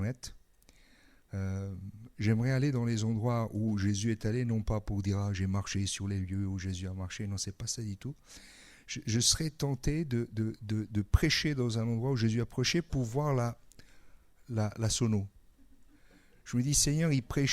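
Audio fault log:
No faults found in this clip.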